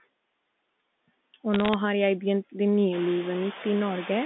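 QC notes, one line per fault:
throughout: noise suppressor artifacts. Steady background noise gets pulled down by about 21 dB between phrases and creeps back under the speech. It gets more noticeable once the room noise rises around 3 s.
1.54–1.74 s: bit errors on a digital phone line. About a fifth of a second of crackly ticks over the speech, from flipped bits on the G.711 line, a few in every thousand. Each bad bit changes one sample, and hits on high-order bits produce the sharp clicks.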